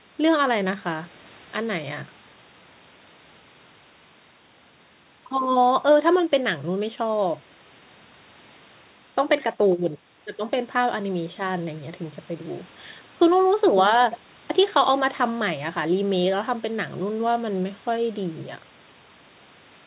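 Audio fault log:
No faults heard.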